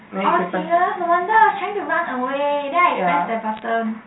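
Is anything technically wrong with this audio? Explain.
Yes. Bit errors on a digital phone line occur from 3.54 to 3.62 s, near the end. Around 0.2 percent of bits in the 8-bit A-law telephone stream are flipped, each corrupting one sample, so sign or high-bit hits produce a short burst of sharp ticks and crackle over the unchanged speech.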